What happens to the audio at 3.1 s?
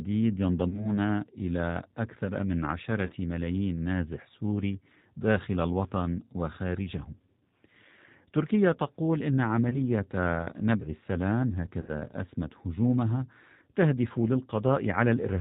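At 3.06 s a stretch of the stream failed to arrive, and the speech decoder covered the gap by repeating its last pitch and vocal-tract settings at falling gain. This is VoIP packet loss concealed by the speech codec, roughly 30 ms missing, which fits one lost packet. The sound smears into a brief buzzy tone or coloured noise that fades. Because each decoded frame depends on the one before, it stays weak or distorted until about 3.15 s.

That moment also carries the G.729 codec damage heard across the whole clip. The sound is rebuilt from a vocal-tract filter, a pitch predictor and a few pulses per frame, at what sounds like the 8 kbit/s G.729A variant. Nothing above 4 kHz survives, so the speech is dull and band-limited, with a plainly rough, synthetic edge.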